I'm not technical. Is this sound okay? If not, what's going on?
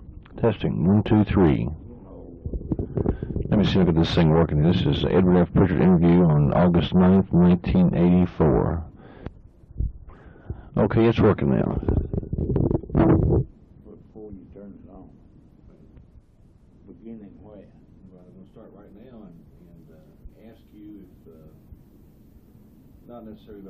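Yes, it sounds fine; nothing wrong stands out.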